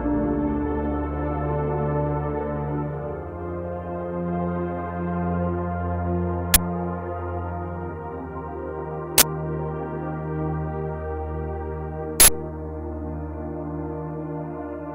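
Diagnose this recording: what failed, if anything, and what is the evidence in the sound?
The failure is in the driver or buffer stage: an uninitialised buffer. Loud bursts of digital noise at 6.54–6.56 s (20 ms), 9.18–9.22 s (40 ms) and 12.2–12.28 s (80 ms) are blocks of leftover memory played as samples. They appear as loud rectangular waveform blocks and bright broadband vertical bands on a spectrogram.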